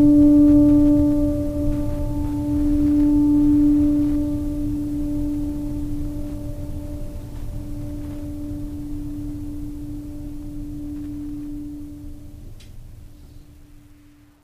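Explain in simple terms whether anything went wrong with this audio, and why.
Nothing went wrong with this music.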